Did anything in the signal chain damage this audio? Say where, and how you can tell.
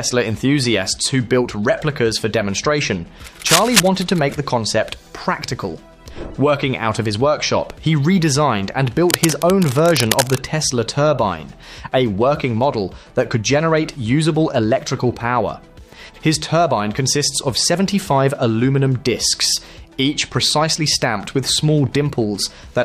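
Yes. Cable scratch noise, in the analogue wiring, appears twice: a short burst from 3.46 to 3.80 s at roughly the level of the wanted signal, and a longer stretch from 9.09 to 10.40 s about 5 dB below it. Both are dense, irregular crackling and rustling laid over the sound. The likely cause is a worn cable, connector or control being moved, so its contact resistance fluctuates rapidly and injects uneven noise bursts.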